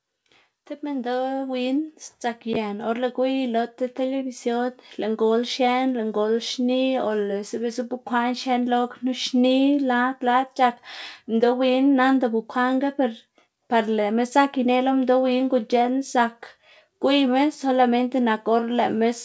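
From 0.8 to 1.77 s, automatic gain rising. The gain control judged the input too quiet and lifted it by about 5 dB. Speech and background swell together. Throughout, nothing is heard above 8 kHz, as the call path band-limits the audio.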